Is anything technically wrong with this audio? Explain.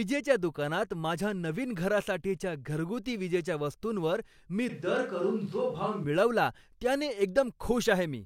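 Yes. A switch to a distant microphone occurs from 4.70 to 6.04 s, right after "विजेच्या वस्तूंवर मी". The close microphone's signal most likely dropped out, leaving a mic farther away to carry the speech. The voice abruptly turns roomy and hollow with thinner bass, falls about 5 dB in level, and sits over room noise roughly 35 dB below it. At 6.04 s it jumps straight back to the close, full sound.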